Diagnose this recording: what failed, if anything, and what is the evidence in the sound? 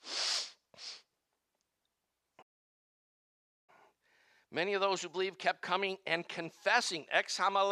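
The player most likely ran short of buffered data or had its output thread held up, and this playback stall left the device with nothing to play. From 2.42 s to 3.70 s the speech stops mid-flow and the output falls silent for about 1.26 s. The gap is too long and too abrupt to be a natural pause, and the speech resumes only when the player recovers and starts feeding samples again.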